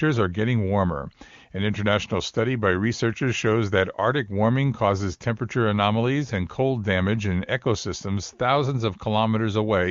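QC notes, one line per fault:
Nothing stood out on listening, with the AMR wideband (HD Voice) path carrying the speech at what sounds like its top rate of around 24 kbit/s.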